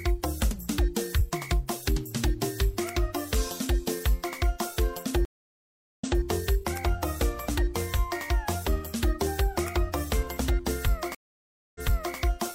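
At 5.25 s and again at 11.15 s a stream reconnect occurs: the connection drops, the player restarts its decoder mid-stream, and the server resends recent data. The audio goes silent for 0.74 s, then repeats from 0.23 s earlier, until 6.22 s. The second gap lasts 0.6 s and replays 0.42 s, until 12.17 s.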